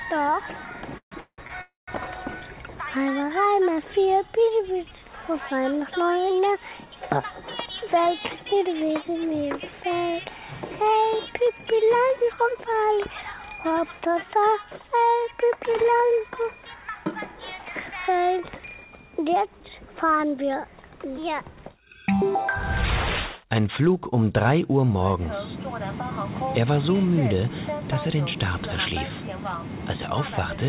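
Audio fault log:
0.98–1.14 s, 1.20–1.41 s, 1.61–1.91 s: call audio freeze. The sound trails into a fading buzz, then 80 to 170 ms of silence, and resumes where it stopped. This adds 134, 174 and 262 ms of delay with nothing lost, likely from packets held up in transit.
1.47–1.52 s: short stall from a late packet. The last sound is held about 25 ms too long with a slight buzz while the jitter buffer waits, then continues without loss.
7.67–9.92 s, 11.73–13.67 s, 14.80–16.33 s: jitter buffer speed-up. The audio plays at 110% speed with unchanged pitch. Pitch-period slices totalling roughly 0.2 s, 0.2 s and 0.15 s are removed, so the sound feels hurried.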